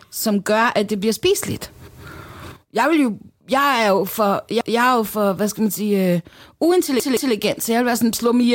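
At 4.61 s a repeated buffer occurs. Fresh audio was late, so the device replayed its last block. A segment of about 171 ms sounds twice, with a hard join at the repeat. This fits an 8192-sample buffer. It is heard as a short stutter. At 7.00 s the same fault returns and runs to 7.34 s. This time the block plays three times in all. Nothing seems lost. The sound just stalls and resumes.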